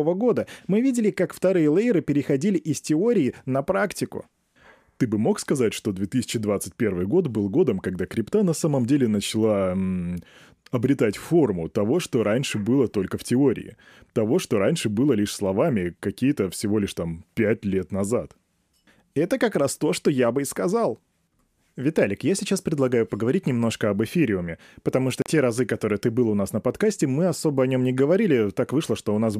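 A Bluetooth stall at 25.22 to 25.26 s cuts the speech to silence for about 38 ms, right after "об эфириуме потому что", before "разы которые ты был" resumes. Likely interference delayed packets, the headphone buffer emptied, and playback paused until retransmissions arrived.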